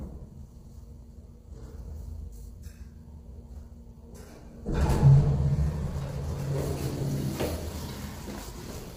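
Throughout, the sound is grainy and rough, with a noisy haze filling gaps between tonal components and nothing above 15.6 kHz. The likely cause is heavy low-delay AAC compression at a low bitrate; a spectrogram shows smeared harmonics and a hard ceiling at 15.6 kHz.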